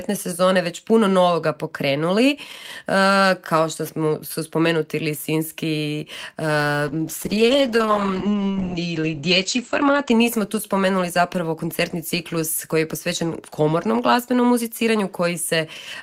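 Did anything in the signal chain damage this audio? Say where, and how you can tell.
Yes, a call bitrate drop in the codec. From 6.89 to 10.17 s it turns rough and muffled, with highs cut from 20 kHz to 8 kHz, consistent with about 9 kbps.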